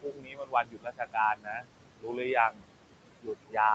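Noise suppressor artifacts run through the whole clip. The suppressor treats steady noise as unwanted and pulls it down by about 21 dB, frame by frame. The room noise, about 10 dB below the speech, sinks in pauses and returns under the voice.

Speech cut by the noise suppressor follows. The suppressor mistakes parts of the speech for noise. From 0.02 to 1.17 s, about a second sinks by up to about 21 dB. Shorter cuts come at 1.35 to 1.67 s, 1.97 to 2.2 s, 2.5 to 2.64 s and 3.2 to 3.57 s. These reach about 19 to 22 dB. Soft sounds there turn faint and swallowed.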